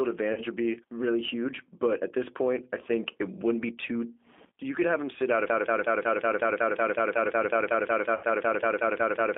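A speech clip carrying G.729 codec damage throughout: the band runs only from 250 Hz to 3.5 kHz, and the rough, synthetic texture fits 8 kbit/s pulse-based speech coding. VoIP packet loss concealed by the speech codec occurs at 0.33–0.41 s, just before "would be really huge". About 40 ms of audio goes missing, consistent with two lost packets, and the decoder fills the gap with stretched, fading sound extrapolated from the last speech. A broken-record loop runs from 5.50 s to the end, where a 184 ms fragment repeats back to back, likely from a stalled player or stream resending its last buffer. VoIP packet loss concealment appears again at 8.15–8.25 s, right after "could have him sit". About 80 ms is lost, which points to four packets, and the decoder's extrapolated, decaying sound smears across the gap.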